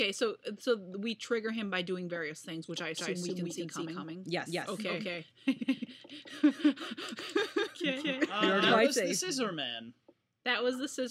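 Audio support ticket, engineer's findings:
Doubled audio track, 2.97 s to 8.79 s. Second full-band copy trails the original by about a fifth of a second. Roughly equal level. Dry, no decay or room colour. Starts and stops abruptly. Likely cause: a second, slower capture path mixed in, or an edit holding two copies out of step.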